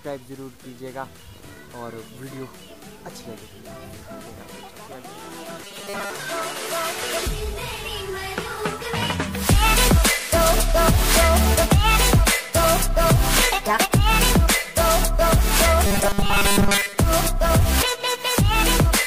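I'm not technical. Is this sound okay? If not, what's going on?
No. Twice, from 5.62 to 6.10 s and from 15.86 to 16.97 s, the sound turns into a stiff, metallic buzz. This is robotic sound from repeated short buffers. Audio likely arrived too slowly, so tiny 5 ms slices were replayed, forcing a steady 200 Hz hum.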